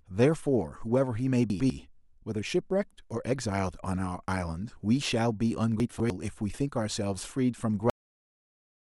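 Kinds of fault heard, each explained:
Chunks out of order: a 100 ms block plays one slot late around 1.5 s and another two slots late near 5.8 s, so the speech jumbles briefly.
Cut-off end: the final buffers never made it out, so the speech stops dead mid-sound at 7.9 s and drops straight into digital silence.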